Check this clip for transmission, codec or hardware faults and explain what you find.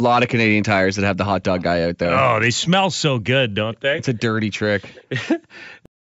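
Two faults stand out: a faint echo leak in two brief scraps, and a cut-off end.

Echo leak, at 1.58 to 1.63 s and again at 4.93 to 5.04 s: a delayed copy of the speech sits about 163 ms behind the original, faint and well below the direct voice. The likely cause is that the far end was playing the call over a loudspeaker and its echo canceller failed to fully subtract what its microphone picked up, so that residue travelled back down the line. It comes through as short ghost fragments trailing the speech.

Cut-off end, at 5.86 s: the final stretch of audio was never written out or played, so the signal stops mid-sound. Instead of a natural decay, the speech drops straight to digital silence for the remaining third of a second or so, an abrupt truncation that leaves the last sound clipped off rather than finished.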